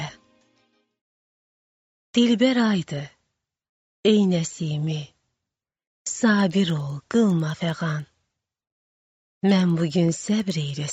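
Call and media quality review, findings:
Resampler restarted on every block. From 6.3 s to end of clip. Regular ticking at 10 Hz, one tick per 100 ms block, only while sound is present. Component: 16 kHz to 48 kHz sample-rate converter. Filter state is reset at each block boundary, so edge samples are computed without their true neighbours. Each block seam carries a small error.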